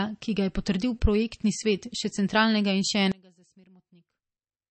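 Throughout the speech, MP3 compression at a bitrate that sounds like about 32 kbps has likely starved the encoder of bits. Nothing survives above 8.3 kHz, so the treble is sheared off. Weak detail flickers in and out from frame to frame, leaving a plainly audible watery, swirling texture.

From 3.12 s to the end at 4.71 s, one channel inverted in polarity is the likely cause of a sudden collapse. When the two sides are summed, the shared centre cancels and the level drops by about 29 dB, leaving only a faint residue of the speech.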